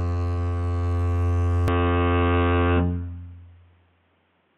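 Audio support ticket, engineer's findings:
Input switched to a poorer device, 1.68 s to end of clip. Music abruptly narrows: nothing above 3.8 kHz, top end gone, tone dull and boxy. No gap at the switch, level about the same. New background noise roughly 45 dB under the music. Likely cause: capture path swapping mid-recording to a band-limited mic or headset call profile with its own noise floor.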